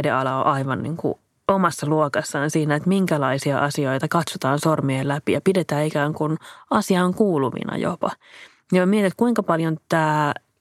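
Speech recording with no technical fault to be heard anywhere in it. Nothing calls for a time or a cause.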